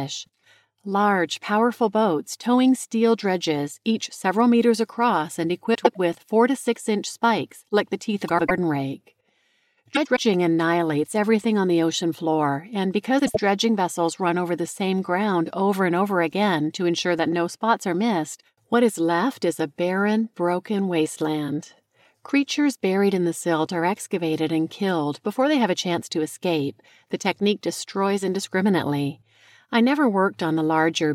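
At 5.74 s, after "several meters across and", the speech shows frames out of order: two adjacent blocks of about 104.5 ms swap places, so the stretch plays back to front in halves. This recurs at 8.28 s, at 9.95 s (before "annihilates everything on the"), and at 13.19 s, after "the ocean floor and", with 78 ms blocks there. Each sounds like a garbled flutter, seen as vertical breaks and jumping harmonic tracks on a spectrogram.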